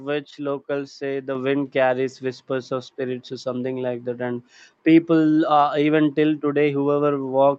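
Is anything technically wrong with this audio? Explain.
Yes, at 1.35 s, just after "which locals say the" and before "wind carries whispers of", the speech and background both jump up together by about 5 dB in a single step. This is a microphone volume stepped up: the call software judged the input too quiet and raised the device's input level at once, mid-phrase. The audio passed through an Opus call path at around 40 kbps, whose top end stops near 8 kHz.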